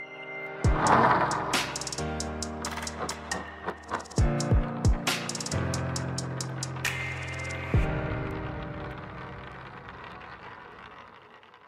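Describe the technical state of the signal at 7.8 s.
At 7.8 s the signal sits inside a run of word clock ticks lasting from 0.47 to 11.33 s. The receiving device runs on its own clock, drifting around 30 ppm from the sender's, so a sample is dropped or repeated roughly every 0.7 s, heard as sharp ticks of uneven strength.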